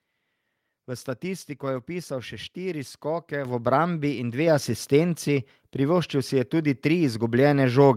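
At 3.45 s and again at 4.47 s the microphone volume stepped up, by about 7 dB and then about 3 dB, as the input gain was raised. Unlike a talker simply getting louder, the background noise jumps instantly with the speech.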